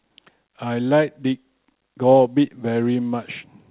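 Nothing here stands out as a fault; it's just speech coming over a call path, and its narrowband sound, with nothing above 4 kHz, fits a G.711 mu-law codec running at 64 kbps.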